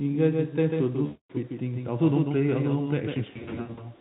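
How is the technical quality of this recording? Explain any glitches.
The recording has two problems: an echo-like second copy running through the whole clip, and two patches where the connection dropped audio and the codec papered over the gaps.

The doubled audio track is there from start to finish. A second, full-band copy of the speech trails the original by roughly 150 ms, sitting about 5 dB lower. It doesn't decay or carry any room sound the way a real echo would. It's just a clean duplicate, which gives everything a slappy, stuttered edge. The likely cause is the same audio being picked up a second time through a slower path, so two out-of-step copies end up mixed together.

The first VoIP packet loss, concealed by the speech codec, runs from 1.06 to 1.31 s, with about 240 ms of audio missing. When packets stop arriving, the decoder keeps extrapolating from the last pitch and filter it had, turning the gain down frame by frame. 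You hear the sound smear into a buzzy tone or coloured noise that fades instead of cutting to silence. Because each predicted frame builds on the one before, the sound stays thin for a moment after real packets resume.

The second loss spans 3.29 to 3.84 s and is patchier. About 340 ms goes missing, scattered over half a second, and the longest single gap is 80 ms. The result is a string of short, fading smears instead of one long one. Each gap leaves the sound weak or distorted until the decoder catches up. The Speex coding itself adds little or no audible damage.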